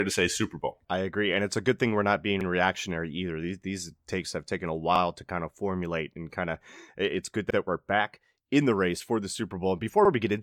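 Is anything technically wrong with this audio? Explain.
Yes. Overlapping chunks occur at 2.41–2.46 s, 4.96–5.00 s, 7.50–7.55 s and 10.05–10.10 s. The speech was processed in 2.5 s chunks, and each new chunk began about 48 ms before the previous one ended, so that slice of audio plays twice at every join. The result is a brief stutter or click recurring roughly every two and a half seconds.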